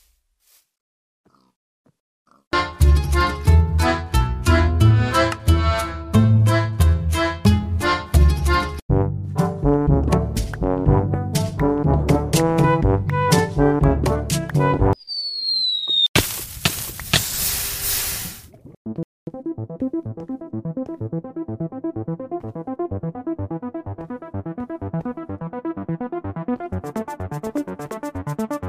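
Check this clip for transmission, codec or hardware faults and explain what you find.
One fault, a playback stall. At 19.03 s the sound drops to silence for 0.24 s, then resumes, likely because the player's buffer ran dry or its output thread blocked.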